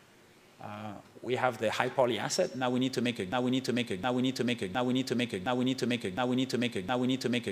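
From 3.32 s to the end, a broken-record loop repeats one 0.71 s fragment six times, exact and undecaying unlike an echo, likely from a stalled stream.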